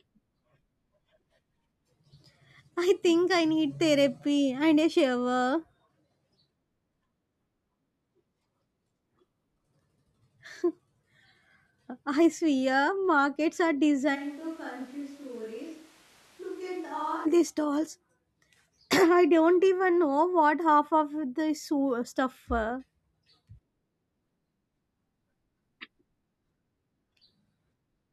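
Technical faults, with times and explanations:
14.17–17.24 s, switch to a distant microphone: right after "I swear markets are" the voice turns roomy and hollow, with thinner bass, a drop of roughly 10 dB and a background bed only about 25 dB below the speech, until it snaps back before "these stalls". The likely cause is that the close microphone dropped out and a farther one took over. The waveform shows a sudden step down in level, and the spectrogram shows weakened low frequencies and a raised noise floor with reverberant smearing.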